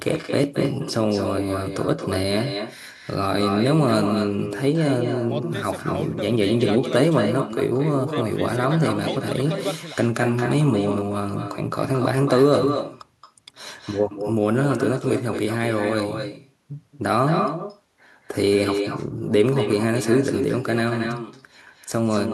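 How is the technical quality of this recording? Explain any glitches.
The recording is marred throughout by echo with no canceller: every phrase is trailed about a fifth of a second later by a thinner copy roughly 7 dB quieter. The far end's loudspeaker feeds its microphone, returning the speech.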